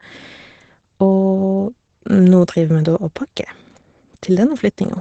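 From start to finish the speech sounds muffled and hoarse, with a slightly robotic edge and nothing audible above about 8.6 kHz. This is Opus voice compression running in its SILK linear-prediction mode at wideband: the coder keeps the band to roughly 8 kHz and quantises the excitation coarsely, which is what roughens the voice. The plainly audible damage points to a low bitrate around 12 kbps.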